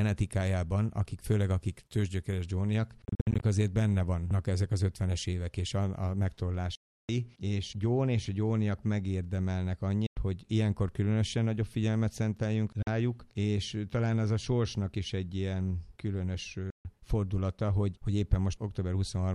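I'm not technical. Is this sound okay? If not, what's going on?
No. The sound briefly goes silent five times, around 3.05 to 3.43 s as a few quick stutters, then 6.75 to 7.09 s, 10.06 to 10.17 s, 12.82 to 12.87 s and 16.70 to 16.85 s, picking up further along each time. This is likely a Bluetooth dropout, where the wireless link to the headphones lost pieces of audio.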